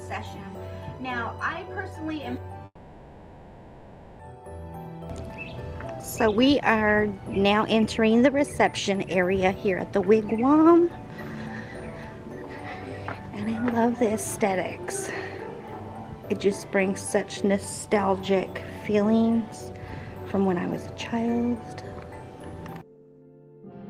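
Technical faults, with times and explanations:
2.65–4.24 s, long network dropout: the sound smears into a fading buzz, then near-silence, and resumes with 1.54 s missing, likely because packets never arrived.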